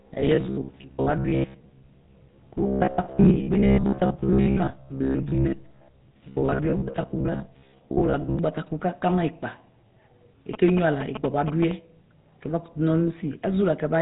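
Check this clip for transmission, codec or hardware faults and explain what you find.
Three faults are present: GSM full-rate coding across the whole recording, a robotic buzz over the first eight seconds, and a burst of GSM signalling interference near the end.

GSM full-rate codec, throughout. The encoder models the vocal tract as a filter and excites it with a sparse, regularly spaced pulse train, discarding most of the excitation detail, and the quality fits a 13 kbps full-rate stream. The speech carries the codec's plainly audible gravelly, buzzy roughness, and the band is cut off above about 3.8 kHz, so sibilants and upper harmonics are missing and the voice sounds thin and boxed in.

Robotic sound from repeated short buffers, 0.02 to 8.39 s. The speech turns into a rigid metallic drone with a steady 66.8 Hz buzz underneath. That buzz rate implies a segment about 15 ms long being replayed. 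The likely cause is audio arriving too late, with playback filling the gaps by looping the last short buffer while the real material is dropped. Roughly half of the audio in this stretch appears to be repeats, so the speech is only loosely followed.

GSM signalling bursts, 10.54 to 11.72 s. A nearby 2G handset exchanging signalling with the network transmits in brief radio bursts, and the audio circuitry rectifies them into sound. The result is a galloping dit-dit-dit of short buzzes repeating at 216.7 Hz, sitting only about 5 dB below the speech for just over a second.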